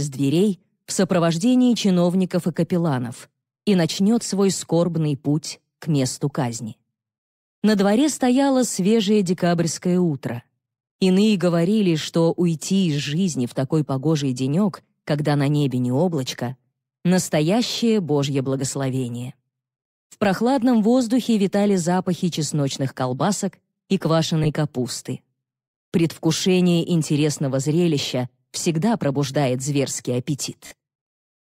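A couple of Bluetooth stutters in this audio. At 24.44 to 24.47 s there's a short glitch where the receiver lost about 14 ms of data and replayed its last buffer to fill the gap, which fits a single dropped packet. At 30.67 to 30.74 s it's worse: around 42 ms went missing, likely about three packets, so the repeat runs longer and turns into a brief buzzy stutter before the sound picks up further along.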